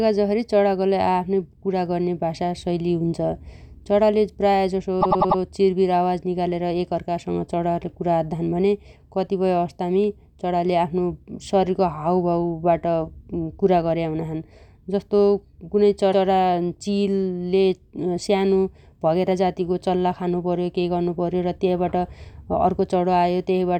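Speech that stutters twice from repeated frames: just after "चणाले प्रायजसो" a 96 ms slice plays four extra times (5.01–5.39 s), and at 16.12–16.24 s a 120 ms slice plays once more. Compressed frames were sent more than once, adding 384 ms and 120 ms.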